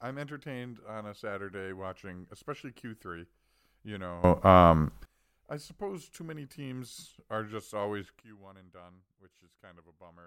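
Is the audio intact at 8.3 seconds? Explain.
No. At 8.3 seconds the audio is inside a sudden gain jump that begins at 8.20 s, right after "teams are just always", and lasts to the end of the clip at 10.26 s. The level drops by about 16 dB from one sample to the next, with the speech and the background noise falling together. This is likely caused by a digital gain setting or bit shift applied without a ramp, leaving the rest of the speech abruptly quieter.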